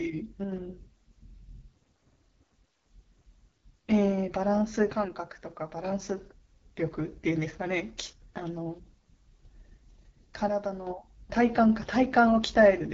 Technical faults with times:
0.00-12.94 AMR wideband (HD Voice) codec
0.44-0.52 one channel drops out
4.92-5.84 one channel drops out
10.48-10.87 one channel drops out

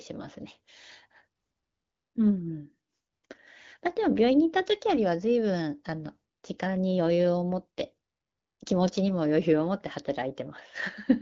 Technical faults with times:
none

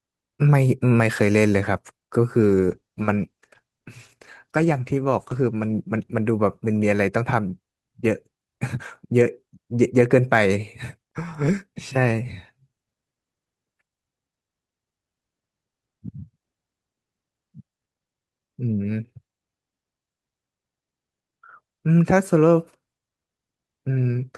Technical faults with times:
2.40-7.05 call bitrate drop

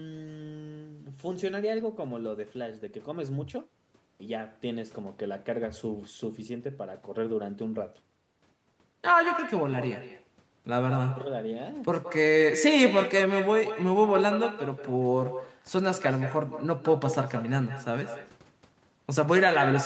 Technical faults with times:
0.00-19.86 echo with no canceller

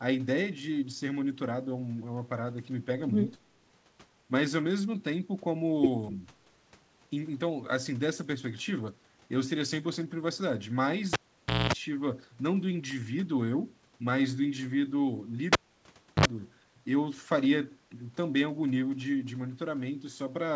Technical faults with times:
11.13-11.73 cable pulled and plugged in
15.53-16.25 cable pulled and plugged in

